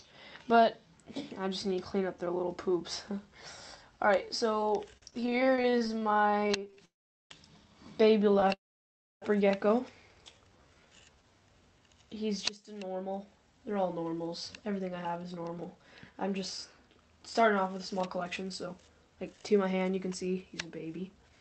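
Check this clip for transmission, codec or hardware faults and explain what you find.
Packet delivery on this call broke down repeatedly, producing two stretches of stutter, two freezes and a period of slowed then hurried playback, all heard through the Opus call path with its top end limited to about 8 kHz.

Repeated stalls (stutter), 4.97 to 6.79 s and 8.31 to 8.53 s: packets arrived late again and again, so the jitter buffer kept running dry and the receiver stretched the last sound to bridge each gap. The first stretch has 32 such gaps, the longest 44 ms, covering about a third of that span. The second has four gaps of up to 20 ms. The sound drags and stutters, with nothing lost.

Call audio freeze, 6.85 to 7.32 s and 8.53 to 9.24 s: the likely cause is packets held up in transit, emptying the buffer. Playback halts for 454 ms and then 681 ms, mostly silent (about 420 ms and 650 ms), before resuming exactly where it stopped, so a gap is inserted rather than audio lost.

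Jitter buffer slow-down, 10.32 to 11.35 s: with its reserve running low, the receiver repeated single pitch periods to rebuild it, adding 205 ms. The audio plays at 81% speed at unchanged pitch, with drawn-out sounds.

Jitter buffer speed-up, 12.50 to 21.37 s: the buffer then held more than its target, so the receiver trimmed short pitch-period pieces, removing roughly a second in total. Playback runs at 111% speed with pitch intact, sounding noticeably hurried through to the end.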